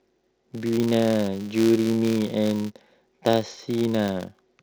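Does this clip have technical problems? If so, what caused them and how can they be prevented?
Yes: a filter restarted on every block adds a steady 188 Hz buzz throughout, tracking speech level, consistent with 256-sample blocks starting from zeroed state. Preserve filter state between blocks.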